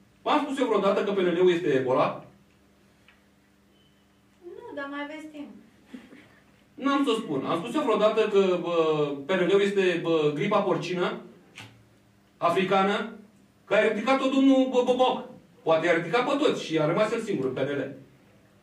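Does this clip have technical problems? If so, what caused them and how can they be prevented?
No, nothing stood out as a technical problem on listening, so there is nothing here that needs a cause or a fix.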